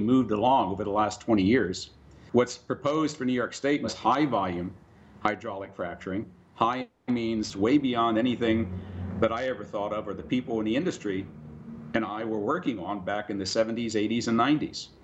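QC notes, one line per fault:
No technical faults can be heard anywhere in the signal.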